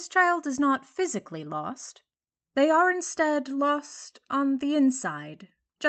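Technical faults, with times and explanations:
No technical faults detected.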